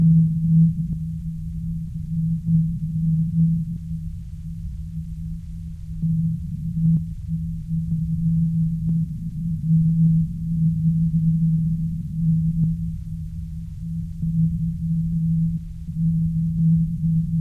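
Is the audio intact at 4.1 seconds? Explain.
Yes, the audio is intact at 4.1 seconds, with no fault audible at that moment.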